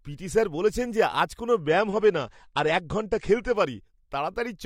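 A speech clip in which, just after "বলেছেন যে আজ কোনও", an adaptive stream at a lower bitrate takes over from 1.56 to 3.56 s. The treble collapses abruptly, with nothing above 10 kHz, and codec artefacts thicken, which fits a drop from roughly 96 kbit/s to 32 kbit/s AAC. On a spectrogram the upper band is sliced off flat at 10 kHz for those two seconds, with sharp vertical edges; the waveform shows no gap.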